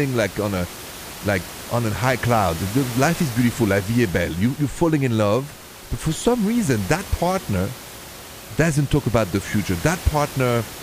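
The speech signal carries no technical faults, and the only other sound is the room's own background noise, which sits about 15 dB below the speech and belongs to the recording itself.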